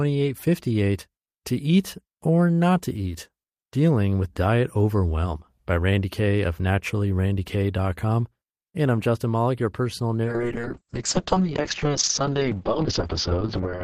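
From 10.24 s to the end of the speech, a call bitrate drop sets in: the encoder is pushed from 32 kbps down to 6 kbps and holds that floor for about 3.4 s. The audio bandwidth shrinks from 20 kHz to 8 kHz, so the sound turns muffled and rough, with a watery texture from coarse coding. Unlike a dropout or packet loss, the signal never breaks up; it stays continuous, just degraded.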